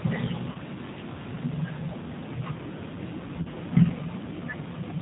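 Throughout, the speech sounds slightly rough and synthetic, and nothing above 4 kHz comes through. This fits the G.729 codec at 8 kbit/s. It rebuilds each 10 ms frame from a vocal tract filter, a pitch predictor and a handful of pulses, so the damage is plainly audible.

From 0.52 to 0.58 s, and again from 3.42 to 3.47 s, the voice smears into a brief buzzy tone or coloured noise that fades, and then takes a moment to recover its strength. This is VoIP packet loss concealed by the speech codec. About 30 ms of audio, consistent with a single lost packet, went missing each time. The decoder filled the gap by extending its last pitch and filter at falling gain, and the following frames stayed weak because each one builds on the one before.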